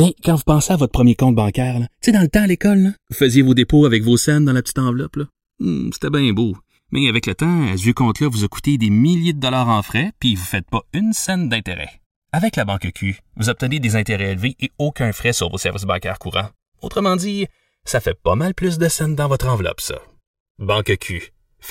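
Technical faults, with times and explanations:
Throughout: channels drifting apart, the stereo sides on separate clocks roughly 100 ppm off, delay sliding to about 2 ms; mono sum shows sweeping comb notches, heard as slow flanging.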